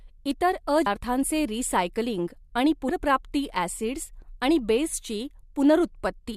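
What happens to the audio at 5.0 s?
At 5.0 s the speech runs on cleanly, with no dropout, click, distortion or other fault at that point.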